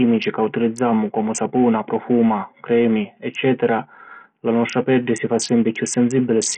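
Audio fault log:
throughout, Bluetooth SBC compression: heavy grit and flickering treble; the spectrogram shows patchy upper bands and a flat ceiling at 16.8 kHz, likely from a starved bit pool near 48 kbps.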